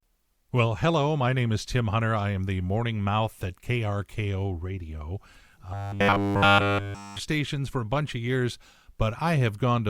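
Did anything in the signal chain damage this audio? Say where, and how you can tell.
Yes. From 5.74 to 7.20 s, just before "for a bunch of", the speech collapses into a rigid, metallic buzz pitched at 100 Hz that only loosely tracks the syllables. Essentially the whole stretch sounds repeated rather than fresh. This is robotic sound from repeated short buffers, likely at the driver or buffer stage. Audio was arriving too slowly, so the playback side kept looping its last block, which fits a 10 ms buffer, while the incoming material was dropped.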